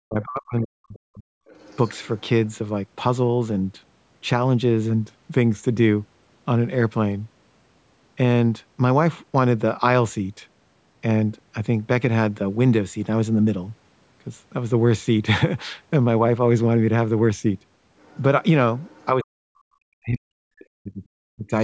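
From 0.0 to 1.3 s the speech is suppressed in double talk. The talker's level dips, sinking very deep at its lowest, for about a second in total. The likely cause is both sides talking at once. The echo canceller could not tell near speech from loudspeaker echo, so it turned everything down.

Then, from 1.47 to 2.02 s, the other side's voice leaks through. It is faint, far below the talker. It most likely comes from loudspeaker sound the canceller failed to remove. Two more scraps follow, at 17.99 to 18.22 s and 18.8 to 19.05 s. Both are quiet.

From 19.18 to 21.54 s, double-talk suppression returns. The voice dips, very deeply, for roughly two seconds overall. The band stops near 8 kHz, as call processing allows.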